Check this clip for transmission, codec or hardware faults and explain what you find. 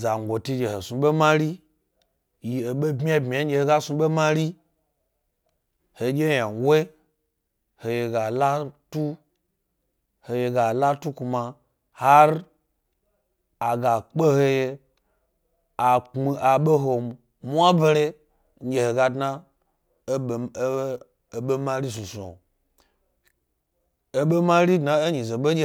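No technical faults can be heard anywhere in the speech recording.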